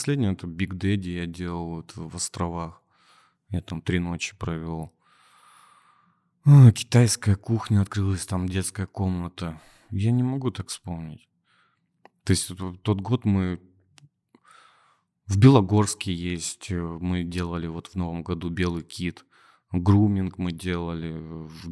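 No technical faults can be heard anywhere in the speech. Nothing in the recording points to a problem in how it was captured, processed or played back.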